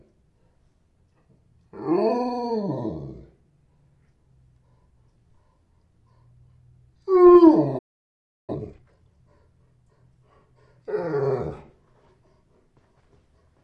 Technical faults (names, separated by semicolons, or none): playback stall; time-compressed catch-up